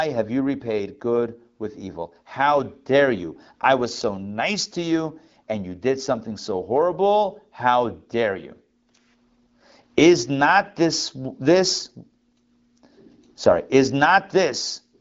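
Nothing goes wrong anywhere in this speech; it simply carries the usual AMR wideband (HD Voice) character at 12.65 kbit/s, with the top end rolling off so there's nothing above about 7.5 kHz.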